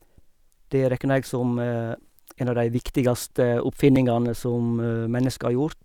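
At 1.95 s and 3.96 s, overlapping chunks replay 6.5 ms where 2.0 s blocks join: a click, a waveform jump, a vertical spectrogram line.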